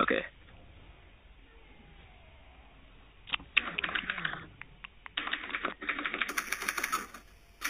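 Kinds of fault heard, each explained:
Imaging from sample-and-hold upsampling: the 8 kHz audio was raised to 44.1 kHz by repeating samples with no smoothing filter, so mirrored spectrum copies, the first spanning 4 kHz to 8 kHz at about 8 dB below the signal, add bright metallic fizz from 6.29 s onward.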